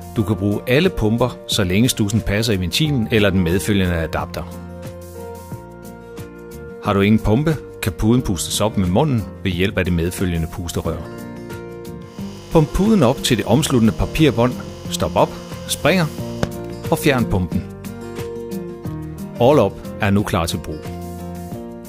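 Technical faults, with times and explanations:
No technical faults can be heard anywhere in the recording.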